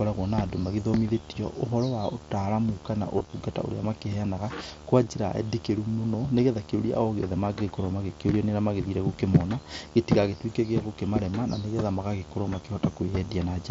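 A video or display buzz runs under the whole speech clip: a screen or video cable is coupling into the audio path, putting a steady buzz at 75 Hz, the display's field rate, with hash riding above it, roughly 20 dB below the speech. The 75 Hz fundamental sets it apart from mains hum, which would sit at 50 or 60 Hz, and the hash gives it a rasp that a clean hum lacks.

From 3.17 to 3.34 s, just before "ũrĩa makĩheanaga kwa", concealed Bluetooth headset packet loss sets in. Losses totalling 97.5 ms are scattered across that 165 ms stretch, the longest unbroken run being 30 ms. The receiver fills each gap by repeating the best-matching recent waveform, so the speech turns briefly buzzy and tonal at full level, with a small warble as real audio resumes. A second loss of 15 ms, two lost frames, follows at 5.04 s, right after "ũrĩa makĩheanaga kwa". Unlike dropouts, these gaps never fall silent; they are filled with repeated sound. 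The light grain of the wideband mSBC headset codec is audible on louder syllables.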